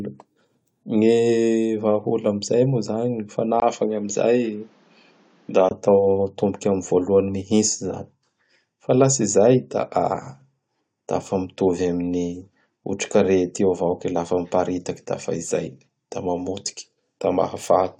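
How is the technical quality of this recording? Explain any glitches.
From 3.6 to 5.71 s the speech turns dull and boxy, with nothing above 7.6 kHz, a faint new background noise well beneath it, a 20 ms gap at the switch, and no clear level change. This is likely an input switched to a poorer device, whose narrower band and own noise replace the original microphone.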